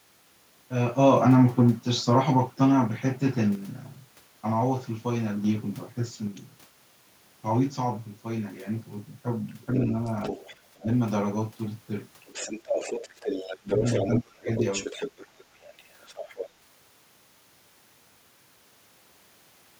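At 3.55 s the level drops abruptly by about 6 dB and recovers at 5.44 s. It falls again at 6.27 s and stays down to the end. This is one channel dropping out. One stereo channel is likely lost, so the mono sum keeps only half the shared signal.

From 9.49 to 10.56 s a second, fainter voice sits about 10 dB under the speech. This is the other side's voice leaking through. The talker's loudspeaker likely feeds the microphone, and the echo canceller leaves residue. It returns from 12.26 to 14.08 s at about 5 dB below, from 14.57 to 15.44 s at about 10 dB below, and from 15.61 to 16.48 s at about 15 dB below.

Speech is suppressed in double talk at 10.78 s, where it dips roughly 15 dB for a tenth of a second. It dips again from 13.46 to 13.84 s, by roughly 20 dB, and from 14.07 to 14.49 s, by roughly 30 dB. The echo canceller likely mistook overlapping talk for echo and ducked everything.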